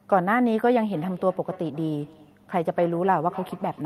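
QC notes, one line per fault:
0.93 s to the end: feedback echo between two devices. The speech comes back at a steady interval of roughly 300 ms, peaking at about 19 dB below the direct speech. Two devices in the same room are joined to one call, so one loudspeaker replays what the other's microphone captured, and that microphone picks it up again. Each device's echo canceller removes only its own playback, leaving this delayed, thinner return in place.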